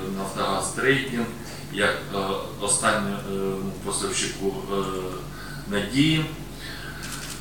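Grainy distortion runs through the whole clip, about 25 dB below the sound. Quiet passages turn gritty. This is likely low bit depth without dither, truncated to about 7 bits.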